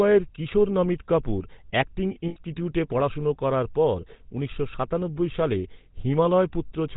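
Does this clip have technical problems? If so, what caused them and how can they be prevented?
Yes. The speech has a buzzy, gravelly roughness and nothing above 4 kHz, the sign of the GSM full-rate codec, which fits a 13 kbps rate: it models the vocal tract and drives it with sparse regular pulses. Prevent it by using a wideband codec.

At 2.28 to 2.37 s and 6.66 to 6.71 s the sound holds as a rough, metallic ring for about 80 ms and 40 ms. These are lost GSM frames, concealed by repeating the last good frame. Prevent them by reducing transmission errors or adding error protection.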